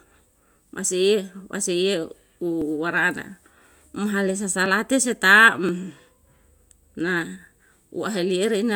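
From 2.62 s to 7.73 s, periodic USB or driver dropouts occur about once every 1.02 s. Each time, a sliver of speech, roughly two milliseconds, is skipped outright. The splice leaves a short tick. The evenly spaced ticks sound like a ticking clock over the speech.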